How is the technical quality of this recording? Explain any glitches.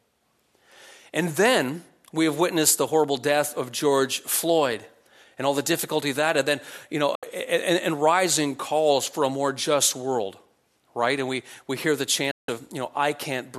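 Two brief digital broadcast dropouts break the sound. At 7.15 s and 12.31 s, the receiver lost good frames and muted. Each is a 3 ms fade to silence, about 72 ms and 168 ms long, which fits lost 24 ms frames.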